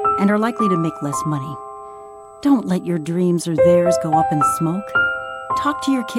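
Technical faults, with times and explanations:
throughout: USB whine. Current pulled by the USB bus in 125-microsecond microframes leaks in through the power or ground path, laying a steady, fixed-pitch whine at 8 kHz under the sound, strongest at its 16 kHz harmonic and faint, roughly 40 dB down.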